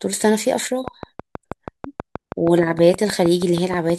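Speech, with a train of clicks from 0.88 to 3.91 s. Regular ticks come 6.3 per second, about 10 dB above the speech, likely from electrical interference.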